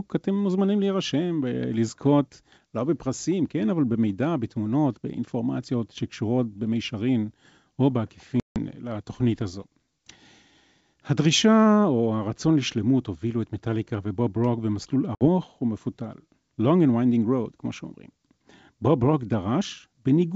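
At 8.40 s and 15.15 s the speech drops into hard-edged silence for 160 ms and 60 ms: packet loss on an ADPCM call. Unlike a clean dropout, it resumes slightly distorted while the decoder's predictor and step size resynchronise.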